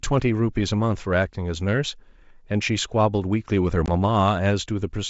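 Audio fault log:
3.86–3.89 s packet loss on an ADPCM call: about one packet gone, leaving a 20 ms blank vertical slot on the spectrogram before the decoder's predictor and step size resynchronise.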